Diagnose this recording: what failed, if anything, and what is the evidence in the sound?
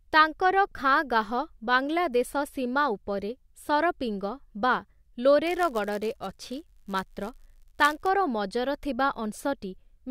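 A block size mismatch (padded) at the driver/buffer stage: from 5.46 to 8.09 s the speech carries a 99.6 Hz buzz from zero-filled gaps, running only slightly slow.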